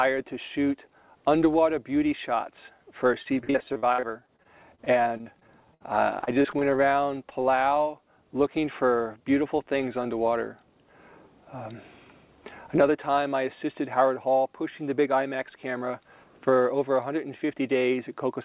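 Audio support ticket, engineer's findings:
Repeated packet loss (robotic sound), 3.22–5.82 s and 6.20–6.78 s: choppy. Receiver conceals holes up to 59 ms by extending the last sound. About a fifth to a quarter of each stretch is concealed.

Short concealed packet loss, 7.29–7.33 s: brief smear. About 20 ms missing, bridged by continuing the preceding sound, then blended back.

Jitter buffer speed-up, 14.82–15.18 s: hurried, 108% speed, pitch unchanged. Buffer draining a backlog by cutting short pitch-period pieces, roughly 40 ms in total.

Nothing above 4 kHz, which fits a G.711 A-law narrowband call path.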